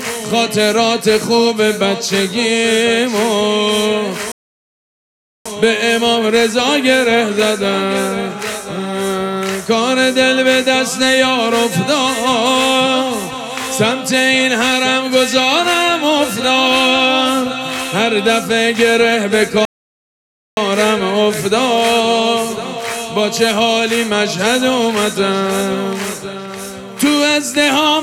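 The audio halts twice in mid-flow, from 4.32 to 5.46 s (1.14 s) and from 19.65 to 20.57 s (0.92 s), each a playback stall where the output falls fully silent before carrying on. The likely cause is the player running out of buffered data or its thread being blocked. Unlike a short dropout of a few milliseconds, each silence lasts close to a second, long enough to register as a pause.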